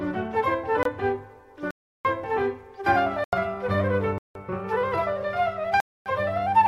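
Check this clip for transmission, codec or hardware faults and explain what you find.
There are five blocks of digital silence, at 0.83 s (24 ms), 1.71 to 2.05 s (341 ms), 3.24 to 3.33 s (85 ms), 4.18 to 4.35 s (171 ms) and 5.80 to 6.06 s (256 ms). The sound drops to silence and comes back with no fade. Even the shortest gap is long enough to be heard as a short hole, and the rest are longer holes.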